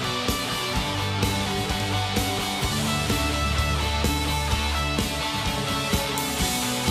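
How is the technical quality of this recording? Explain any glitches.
Nothing in this music recording stood out as a technical problem on listening, so there are no glitches to explain.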